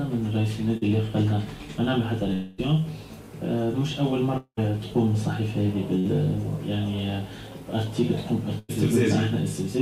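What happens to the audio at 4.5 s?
From 4.37 s to 4.59 s the audio breaks off. The last sound before the gap is stretched out as a decaying buzz or hiss over roughly 0.2 s and drops to silence for about 60 ms before normal audio resumes. This is likely a long network dropout. No packets arrived, so the receiver concealed the gap by extending what it last had, and when the stream returned, about 200 ms of the original audio was gone for good.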